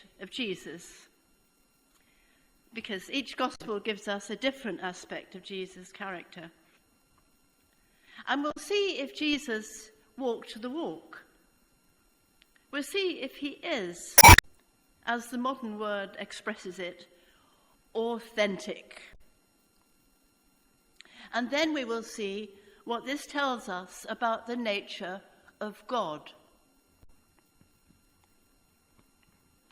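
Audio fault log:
3.54–3.61 s, 8.50–8.57 s, 14.15–14.45 s, 19.11–19.21 s, 27.03–27.10 s: damaged data in a compressed stream. Brief chirps or blips, mostly about 70 ms, longer at 14.15 s. Corrupted frames made the decoder lose sync and resynchronise on a later header. At 19.11 s this added 8 ms.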